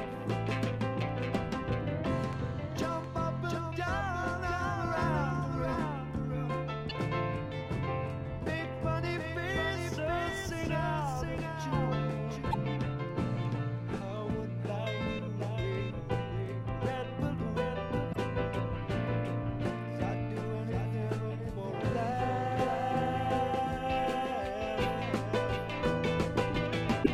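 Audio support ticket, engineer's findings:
Doubled audio track, whole clip. A second full-band copy trails about 0.7 s behind, roughly 5 dB down. No decay or room colour on it. Likely cause: a slower second capture path, or an edit holding two copies out of step.

Damaged data in a compressed stream. Short glitches at 6.86–6.92, 12.48–12.55, 18.09–18.16 and 27.00–27.07 s. Corrupt compressed frames, misread by the decoder. It loses sync and hunts for the next frame header.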